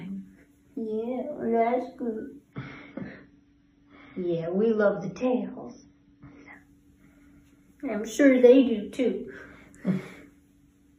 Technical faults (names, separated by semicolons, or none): adaptive stream at a lower bitrate